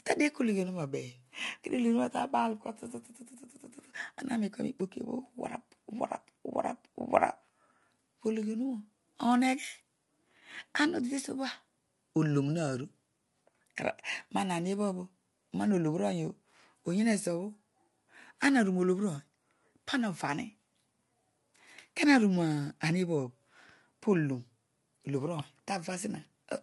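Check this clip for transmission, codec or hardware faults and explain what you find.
One codec fault runs through the whole clip. The speech sounds rough and grainy, with noise between harmonics and nothing above 11.6 kHz, likely low-delay AAC compression, with short frames starving pitch detail at what sounds like about 32 kbps.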